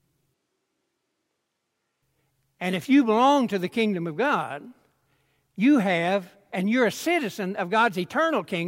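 From 0.34 to 2.02 s the speech turns hollow and roomy, likely a switch to a distant microphone. The waveform steps down roughly 5 dB at the start and back up at the end, and the spectrogram shows a noise floor about 30 dB below speech.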